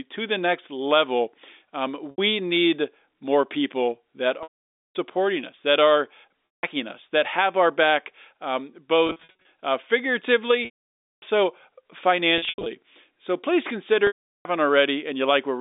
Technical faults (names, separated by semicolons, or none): packet loss with pitch repetition